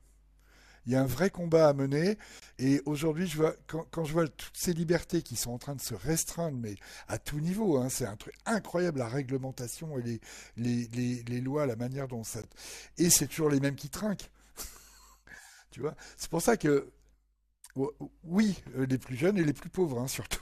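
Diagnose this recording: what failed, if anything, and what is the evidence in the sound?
The speech drops out twice in a way that points to the codec stage, specifically a gap at a join of encoded pieces. There's a hole of about 23 ms from 2.40 to 2.42 s and another of 16 ms at 12.42 s, exactly 10 s apart. That fits audio cut into 10-second chunks, each encoded on its own and butted together without trimming. Every encoder pass leaves its start-up delay and last-frame padding in, so a short stretch of silence opens and the speech resumes where it stopped.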